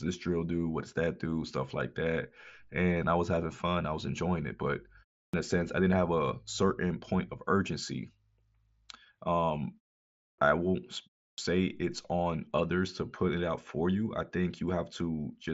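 At 5.29, 10.34 and 11.34 s there's a clipped start after a pause: the speech comes back abruptly, with roughly 40 to 45 ms of its onset missing each time. The gaps before them are short, about 0.33, 0.62 and 0.34 s, which is apparently enough for the output to drop into sleep and then need a moment to wake and lock again. So the first sounds get swallowed and each phrase seems to jump in mid-attack.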